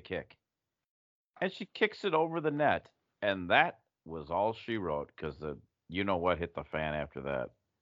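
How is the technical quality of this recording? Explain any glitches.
The speech signal has no technical faults to report, so there are no glitches to explain.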